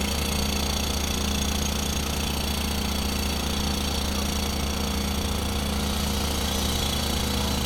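No technical faults can be heard in this recording.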